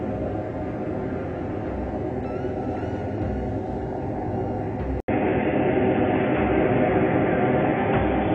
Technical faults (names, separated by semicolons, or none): input switched to a poorer device